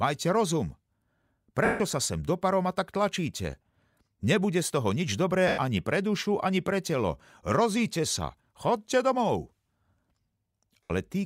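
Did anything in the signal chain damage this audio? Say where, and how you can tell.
Yes. Lost LE Audio frames at the wireless link: dropouts at 1.65 to 1.80 s, 5.48 to 5.58 s and 10.84 to 10.90 s, lasting 150, 100 and 70 ms. The LC3 decoder patched each gap by repeating the last spectrum with scrambled phase, then fading it. A spectrogram shows smeared, noisy bands that dim toward each gap's end, and the waveform narrows there.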